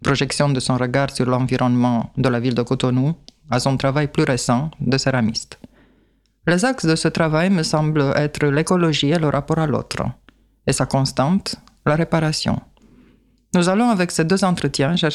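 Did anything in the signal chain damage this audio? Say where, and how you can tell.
No, nothing in the signal chain stood out as a problem on listening.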